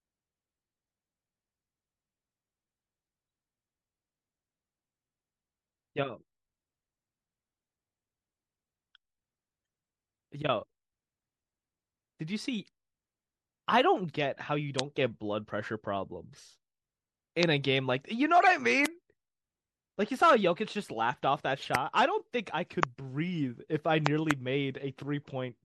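MP3 compression runs through the whole speech recording: the encoder, likely starved of bits, leaves a watery, swirly texture, dulled treble and smeared consonant attacks. The damage is plainly audible and fits a bitrate of around 64 kbps.

Loud pops land at 14.79 s and 17.43 s, each a single sharp click about 25 dB above the speech, which continues underneath. The likely cause is a sudden voltage step or pulse from a plug, switch, static discharge or driver glitch reaching the signal path.

A corrupt frame decoded appears from 18.42 to 18.48 s. Damaged compressed data was played anyway, so misread gains and codes put energy at wrong frequencies, producing a brief chirping burst peaking around -15 dBFS and lasting roughly three frames' worth.

Another loud pop follows at 18.86 s, again about 25 dB above the speech.

A second corrupt frame decoded, at 21.62 s, is a much quieter blip of misplaced energy, peaking around -30 dBFS and lasting about one frame.

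More loud pops follow at 21.75 s (about 20 dB above the speech), at 22.83 s (about 25 dB), and as a pair of pops between 24.06 and 24.33 s, also about 25 dB above the speech.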